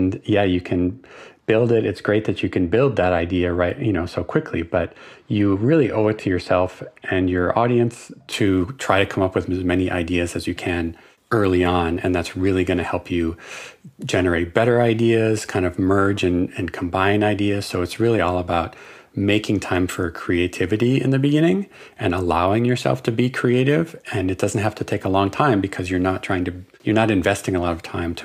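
Speech that sounds dull and muffled from the start to 8.32 s, its treble rolling away smoothly to about 13 dB down at 10 kHz relative to 1 kHz. This is de-emphasis applied wrongly: a treble-cut stage applied to audio that had no matching pre-emphasis, or applied a second time.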